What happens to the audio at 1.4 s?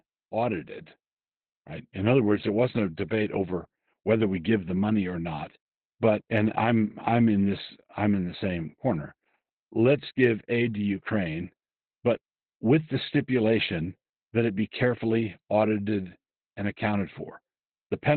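At 1.4 s you're hearing Opus voice compression, which runs through the whole clip. It sounds like the SILK speech coder squeezed to narrowband at a very low rate, probably around 8 kbps. Everything above about 4 kHz is gone and the excitation is coded coarsely, so the speech comes out muffled, hoarse and a bit robotic.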